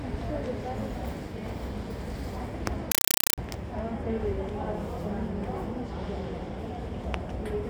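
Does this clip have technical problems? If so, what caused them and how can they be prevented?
Yes. From 2.92 to 3.38 s the sound is replaced by very loud, chattering static: a compressed stream played as audio. Short bursts of about 5.3 ms of noise repeat 31.25 times a second with silence between them, which fits Dolby Digital (AC-3) frames sent as if they were ordinary samples and never decoded. That steady, machine-like 31 Hz chatter separates it from broadband noise or clipping, which have no frame rhythm. To prevent it, set the receiver or output to decode or bitstream-pass the format correctly, or send plain PCM.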